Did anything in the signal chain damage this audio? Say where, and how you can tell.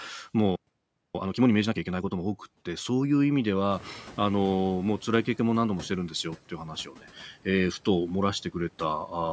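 Yes. Between 1.15 and 2.31 s the player is doing a time-compressed catch-up after a stall. The speech runs at 1.5 times normal speed but keeps its pitch. That comes from the playback buffer trimming small slices and cross-fading over the joins to clear its backlog.

In the call processing, the room noise jumps by about 17 dB around 3.5 s, and from 3.7 to 6.06 s you hear the noise suppressor catching up. At first the noise comes through with less reduction, then it settles down by about 8 dB over roughly 2.4 s as the suppressor's noise estimate adapts to the new level.

At 6.85 to 7.06 s there's speech cut by the noise suppressor, in the same call processing stage. About a tenth of a second of speech gets pulled down with the background, by up to about 10 dB, so it sounds swallowed. The suppressor misread those quiet speech sounds as noise.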